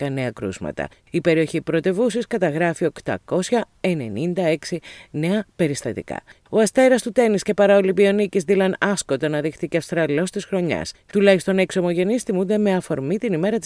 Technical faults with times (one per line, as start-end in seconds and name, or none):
none